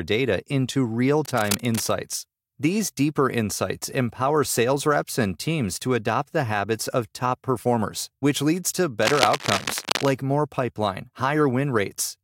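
Cable scratch noise shows up from 1.25 to 1.91 s, right after "data into real", and again from 9.01 to 10.09 s, just before "more pipeline", sitting around 10 dB and then 5 dB under the speech. It's dense, uneven scratchy rustling, likely a worn cable or connector being moved.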